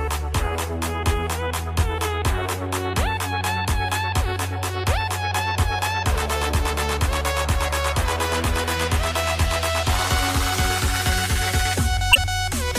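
At 12.11 to 12.18 s, damaged data in the compressed stream makes the decoder misread corrupt frames and lose sync, producing a brief glitch.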